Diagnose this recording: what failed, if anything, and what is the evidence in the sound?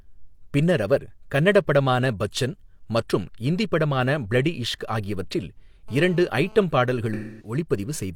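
GSM phone buzz, 5.88 to 6.63 s, enters at the analogue wiring stage. A hard, raspy buzz at 217 Hz with dense harmonics sits about 25 dB below the speech and pulses irregularly, pointing to a nearby phone in a data transfer whose radio bursts the audio circuitry rectifies.

AAC frame loss with concealment, 7.13 to 7.54 s, is a codec-stage fault. About 256 ms of speech turns into a smeared, noisy patch, which fits a run of roughly six lost frames that the decoder patched by extending the last good spectrum.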